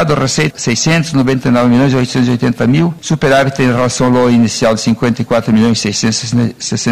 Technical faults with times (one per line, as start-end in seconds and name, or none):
none